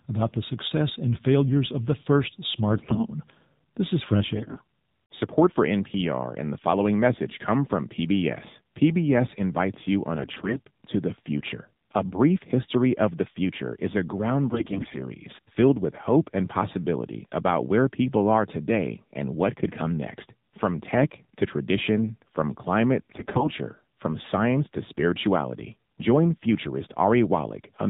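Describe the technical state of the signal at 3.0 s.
At 3.0 s you're in the middle of a burst of AMR bit errors running from about 2.76 to 3.07 s. Flipped low-priority bits scatter the excitation pulses and skew the fine pitch, gain and spectral values, so the voice keeps its pitch and level but goes hoarse, scratchy and gargly. That points to a fairly heavy error rate, something like one bit in seven.

Underneath that, the whole clip carries the AMR narrowband mobile codec. Everything above 4 kHz is gone, and the low-rate vocal-tract model leaves the speech plainly buzzy and synthetic, which fits the 7.4 kbps mode.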